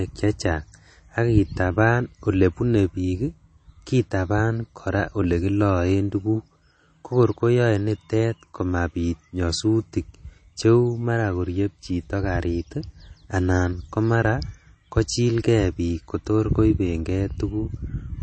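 Throughout the speech, the treble stops dead at about 8.4 kHz. The sound is watery and swirly, with chirpy s sounds. This is likely MP3 compression, which fits a low bitrate near 32 kbps. Starved of bits, the encoder drops quiet detail frame by frame.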